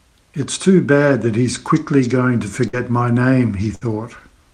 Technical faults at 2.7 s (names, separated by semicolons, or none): burst of packet loss